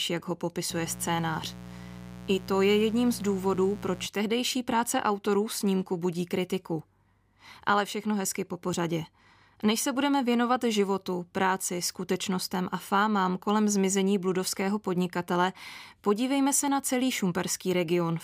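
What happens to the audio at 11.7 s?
At 11.7 s the audio is intact, with the speech passing through that moment with no audible fault.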